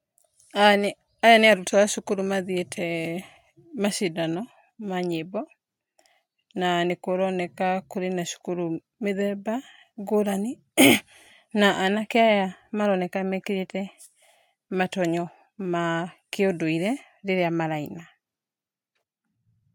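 No technical faults can be heard anywhere in the recording, and the speech signal comes through without any audible disturbance.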